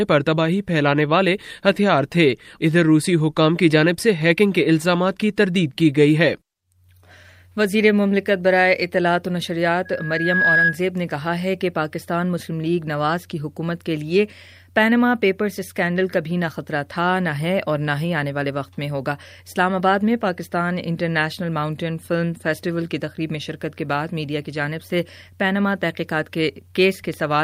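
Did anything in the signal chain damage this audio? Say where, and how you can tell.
Yes. From 9.85 s to 10.79 s a steady tone near 1.7 kHz swells out of the sound over most of a second and ends up a few decibels louder than everything else. That is loudspeaker feedback squeal, arising at the capture end of the chain. A microphone was picking up a loudspeaker it was feeding, and around 1.7 kHz the loop gain rose above one, so that frequency reinforced itself on every pass until the amplifier limited it or the loop was broken.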